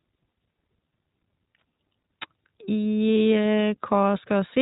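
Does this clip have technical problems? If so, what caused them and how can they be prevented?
Yes. Coding with the iLBC codec, which fits its 20 ms-frame mode, removes everything above 4 kHz throughout, leaving the speech plainly rough and synthetic. To prevent it, send the audio through a wideband codec such as Opus or G.722 wherever the connection allows.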